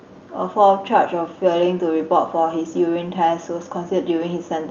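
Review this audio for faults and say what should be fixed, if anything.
Nothing here needs fixing: the speech sits well above a low room noise floor, about 48 dB down, and the call path's coding leaves the high end rolling off around 12 kHz, as expected for a super-wideband Opus stream at a moderate bitrate.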